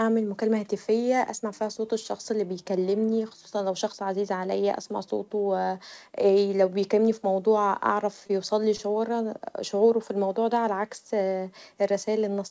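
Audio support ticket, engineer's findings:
Two short stalls from late packets, at 8.27–8.31 s and 8.76–8.81 s. Sound briefly held and smeared, slight buzz or dip on the stretch, nothing actually dropped. Probably the jitter buffer ran dry waiting on a late packet and stretched the last bit of speech for about 25 ms and 23 ms, then carried on from the same spot. Timing shifts later by that much each time. Band tops out at 8 kHz, which fits G.722 on the call path.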